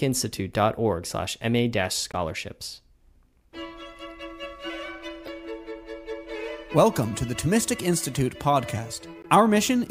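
Three short bursts of damaged data in a compressed stream occur, at 2.12 to 2.15 s, 5.26 to 5.28 s and 9.22 to 9.26 s. Each lasts roughly 30 ms and is heard as a brief chirp, squawk, click or short hole breaking through the sound. At these points the encoded bytes are corrupt, so the decoder misreads the affected frames, loses sync and hunts for the next valid frame header before normal playback resumes.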